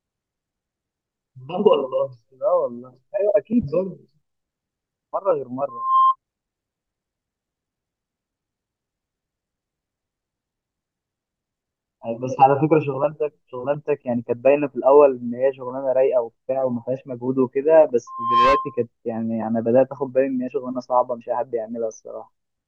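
Speech marred by loudspeaker feedback squeal: the microphone re-amplifies its own loudspeaker, so a 1 kHz tone swells within about a third of a second to roughly 5 dB above the voice, at 5.68–6.16 s and 18.07–18.84 s.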